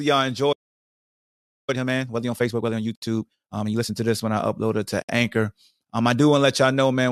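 At 0.52 s the speech cuts out and stays silent for about 1.09 s until 1.70 s, a playback stall, likely the player running dry or its thread getting blocked. From 1.70 s to 3.94 s you get time-compressed catch-up: the player trims its backlog by cutting and cross-fading tiny pieces, so the speech runs 1.5 times fast at normal pitch until just before "to this when I". Inside that stretch, at 2.95 s, and again at 5.02 s right after "I upload it to", there's a gap at a join of encoded pieces. Each is about 67 ms, coming 2.0 s apart, because separately encoded chunks were butted together with their start delay and end padding left in.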